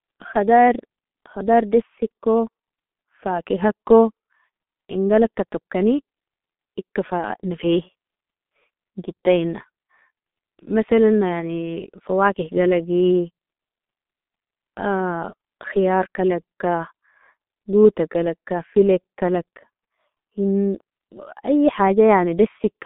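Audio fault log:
throughout G.723.1 codec: a heavily coded stream, fitting about 6.3 kbit/s, keeps only 200 Hz to 3.6 kHz, leaving speech muffled and hoarse with smeared consonants.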